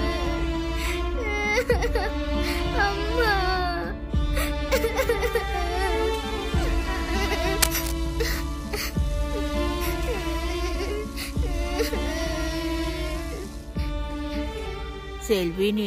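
From 0.00 to 3.15 s there is channel delay (comb filtering): one channel arrives roughly a single sample late, around 0.02 ms, and the two are summed to mono. With so short an offset, the first cancellation notch falls near the top of the audible band, around 20 kHz, so there is no strong hollowness. The effect is a slight softening and loss of air in the extreme treble until 3.15 s.

At 7.61 to 7.93 s a burst of cable scratch noise appears: dense, irregular crackling and rustling laid over the sound for about a third of a second, reaching roughly the same level as the programme itself. The sound points to rapid changes in contact resistance, likely from a worn cable, connector or control being moved.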